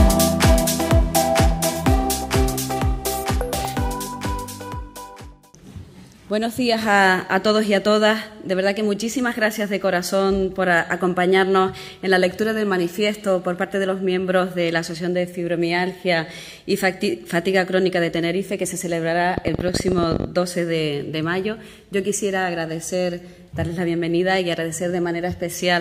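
From 19.38 to 20.25 s a rapid, uneven ticking sits on top of the sound: a train of clicks, about twenty of them at roughly 20.8 per second, peaking around 15 dB above the audio. Repeated pulses of this kind likely come from nearby electrical interference or a struggling interface.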